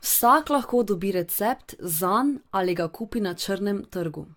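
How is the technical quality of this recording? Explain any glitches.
The speech shows generation loss from start to finish. It sounds swirly, hollow and smeared, consonant attacks blur, and nothing is present above 17.1 kHz. The likely cause is about seven successive AAC-style re-encodes at a moderate bitrate, each quantising on a shifted frame grid so the noise and spectral holes compound.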